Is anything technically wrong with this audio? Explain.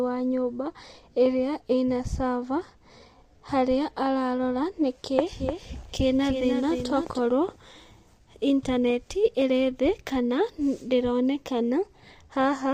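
Yes. Two faults are audible.

Low-delay AAC compression runs through the whole clip, and the damage is plainly audible. The speech sounds rough and grainy, with noise filling the gaps between harmonics and a top band that sounds thin and synthetic. This is likely AAC-ELD, the low-delay codec used in video calls, at a rate that fits about 32 kbps. Its short frames resolve pitch harmonics poorly, so at this bitrate the coder cannot keep the harmonic structure clean.

A doubled audio track appears from 5.39 s to 7.19 s, starting just after "harĩa ararora nĩkĩ". A second full-band copy of the speech trails the original by around 300 ms at about 5 dB lower, heard as a dry, distinct repeat with no reverberant tail. It switches on and off abruptly at both edges. The likely cause is the same signal reaching the mix twice, once through a slower capture path, leaving two copies out of step.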